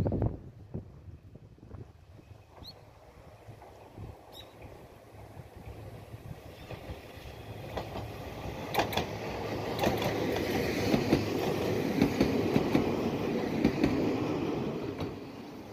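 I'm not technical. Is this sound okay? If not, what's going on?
Yes, nothing wrong here: no technical faults show up anywhere in this recording.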